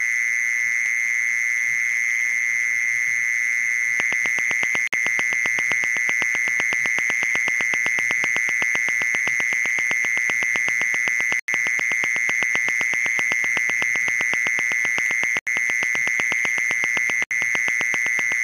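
A regular ticking runs over the audio from 4.0 s to 18.33 s, a train of clicks arriving about 7.8 times a second, roughly a hundred in all, with peaks around 20 dB above the surrounding sound. The pulses share the same shape and keep their steady pace through quieter moments too. The likely cause is an outside source injecting a repeated pulse, such as interference from nearby equipment or a faulty connection or power supply. The audio also drops briefly to silence four times, at 4.87 s for 54 ms, 11.39 s for 88 ms, 15.39 s for 80 ms and 17.24 s for 70 ms, then carries on. These gaps are likely Bluetooth stalls, where interference delayed packets, the headphones' buffer emptied and playback paused until the resent data arrived.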